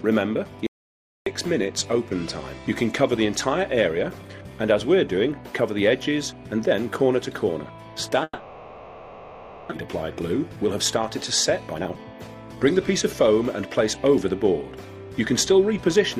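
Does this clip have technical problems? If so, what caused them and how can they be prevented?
Yes. From 0.67 to 1.26 s there is an audio dropout to silence: about 0.6 s of silence with no room tone, likely from an input that was briefly disconnected or muted. Securing connectors and monitoring input levels during recording prevents this.

From 8.23 to 9.73 s a long network dropout occurs, likely a stretch where no packets arrived. The receiver stretches the last sound into a fading buzz for about 1.5 s, and about 1 s of audio is lost. Network redundancy or forward error correction reduces such outages.

Two jitter buffer speed-ups follow as the receiver sheds the half-second of built-up delay. From 9.85 to 10.68 s the audio runs at 110% speed, and from 11.6 to 13.15 s at 124%. Pitch stays the same but the pacing sounds hurried. A steadier network path, or a buffer that catches up more gradually, keeps this less audible.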